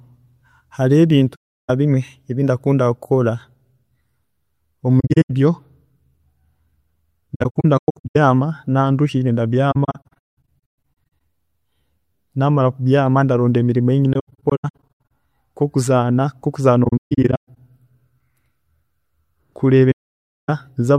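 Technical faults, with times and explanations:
1.35–1.70 s, 5.00–5.31 s, 7.34–8.16 s, 9.71–10.60 s, 14.13–15.00 s, 16.84–17.56 s, 19.91–20.50 s: AAC frame loss with muting. Missing frames of about 21 ms each are decoded as silence, and the overlapping windows fade the speech out and back in, leaving soft-edged gaps. In the middle five, the gaps are scattered, with the longest runs lasting up to about 200 ms.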